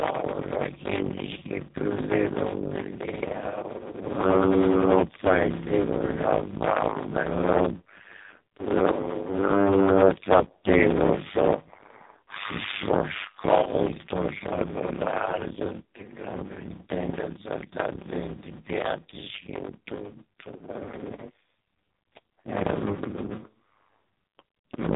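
Block size mismatch (padded) runs throughout the clip. Each block is only 256 samples long, shorter than what the next stage reads, and the gap is filled with zeros. This gives a steady 100 Hz buzz, and the speech plays at about 0.53 times its normal speed with its pitch roughly unchanged.

AMR narrowband mobile codec damage is also present from start to finish. Nothing above 3.8 kHz survives, and the heavy coding damage makes the speech sound buzzy and synthetic, which fits a very low AMR-NB mode of around 5 kbps.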